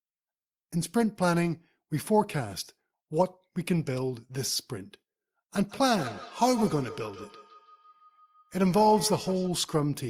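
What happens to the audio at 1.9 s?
Nothing goes wrong at 1.9 s; the speech plays through that point intact, with no dropout, click or distortion.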